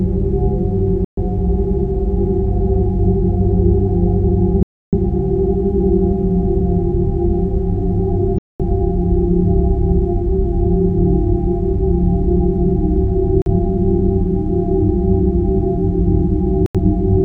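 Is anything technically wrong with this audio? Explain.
Yes, there is a digital broadcast dropout, occurring five times. At 1.05–1.23 s, 4.63–4.96 s, 8.38–8.65 s, 13.42–13.48 s and 16.66–16.79 s, the receiver stopped getting decodable data, because of signal loss or frames failing their checks, and muted until clean frames returned. Each gap removes about 43 to 300 ms of sound, which fits the loss of a few fixed-length frames. The audio drops to silence and then resumes further on, with the missing stretch gone rather than delayed.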